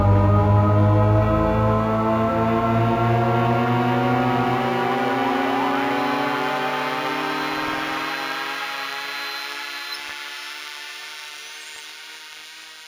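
Throughout, linear interpolation has raised the sample rate, fitting a 16 kHz source taken to 48 kHz. This imaging from linear upsampling dulls the top and leaves faint mirror images, about 30 dB down between 8 and 16 kHz, heard as a light metallic shimmer.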